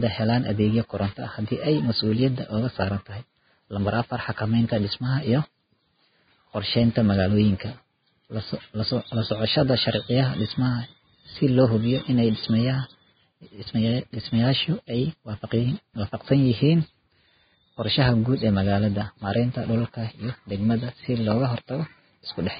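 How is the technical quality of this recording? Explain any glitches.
Poor, because heavy lossy-codec damage runs through the whole speech recording. Vorbis compression throughout: likely a low bitrate, around 16 kbps, cutting everything above 4.9 kHz and coarsely quantising the remaining treble into hissy, grainy noise with blurred consonant attacks.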